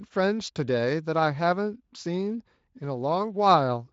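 The speech carries no technical faults, and the Speex coding it passes through leaves only a light trace of its character on the sound.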